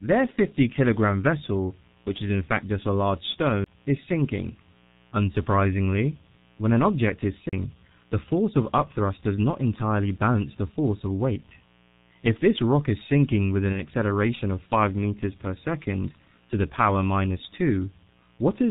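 Switching spikes from a 60 Hz mains supply leak into the signal for the whole recording, laying a steady, raspy mains buzz about 35 dB below the speech. Throughout, heavy G.723.1 codec coding at 6.3 kbit/s strips everything above 4 kHz and tracks the voice slowly, so speech sounds muffled and hoarse with smeared consonants. At 3.64 to 3.66 s, between "fact just a large" and "is sinking", the laser jumps a track. This CD skip gives a very brief mute and an abrupt jump in the speech. A second CD skip at 7.49 to 7.53 s, after "when an object is" and before "the force of upthrust", leaves a slightly longer gap and another sudden jump. At 13.72 to 13.80 s, just after "is sinking with an", the decoder fills a missing stretch that fits one lost 30 ms frame. This VoIP packet loss concealed by the speech codec sounds like a brief stretched, fading smear.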